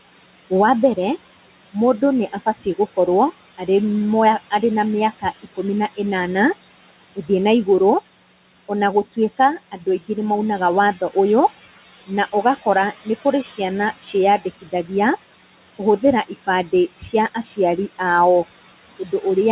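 Noise suppressor artifacts run through the whole clip. The suppressor pulls the room noise down by about 17 dB between phrases and lets it back up under the talking, so the residue pumps and flutters. That movement with the speech is what separates it from a steady noise floor.

Speech cut by the noise suppressor comes at 9.72 to 10.09 s, 14.61 to 14.91 s and 18.99 to 19.22 s. The suppressor mistook quiet parts of the speech for noise and turned them down with the background, by about 8, 14 and 7 dB over roughly a tenth of a second each. The 14.6 s one is the deepest and a little longer. These sound swallowed rather than silent, unlike a packet dropout. Throughout, the sound is band-limited with nothing above 4 kHz, as expected of the narrowband call codec.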